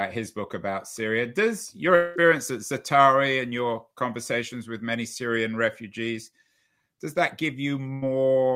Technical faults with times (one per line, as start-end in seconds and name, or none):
1.95-2.18 long network dropout
7.94-8.04 burst of packet loss